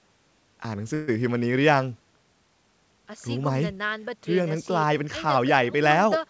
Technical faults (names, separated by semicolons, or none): call audio freeze